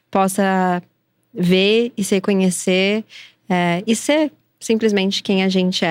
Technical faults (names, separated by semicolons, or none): none